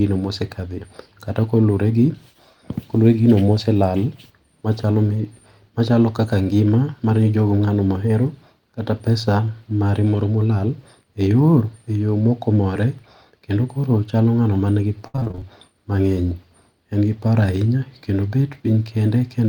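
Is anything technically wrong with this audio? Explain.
Yes, there's a burst of repeated packet loss (robotic sound) from about 15.07 to 15.44 s. Packets kept dropping, and each hole got patched by stretching the previous sound, over half of that stretch. It comes out choppy, with bits of the speech missing.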